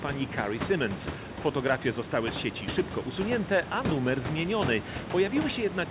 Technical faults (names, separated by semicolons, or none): none